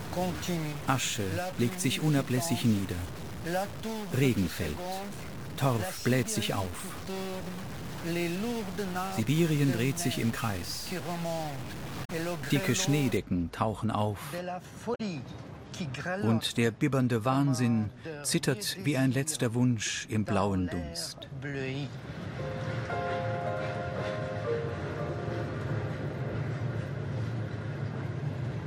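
From the start to 13.17 s, a stuck bit, likely one data bit held at a fixed value by a faulty line or converter, pushes many samples off by that bit's weight, giving distortion that also fills quiet moments with noise. Damaged data in the compressed stream then makes the decoder lose frame sync twice, at 12.01–12.10 s and again at 14.92–15.01 s. Each time it misreads the corrupted frames and hunts for the next valid header, leaving a short disruption of about 90 ms in the audio.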